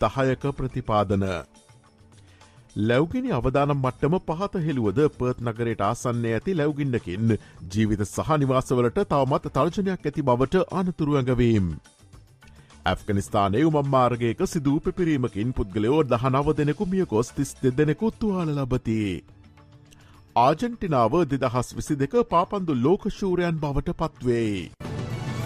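Nothing in the audio indicates a technical fault anywhere in its duration.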